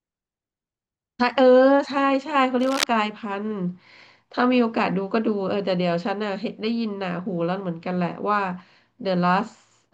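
At 2.60 s a burst of cable scratch noise cuts across the speech and lasts until about 2.84 s, roughly a quarter of a second. It's a dense, ragged scratching sitting only a little below the speech. The likely culprit is a worn cable or connector being moved, so the contact resistance jumps around and throws uneven noise into the signal.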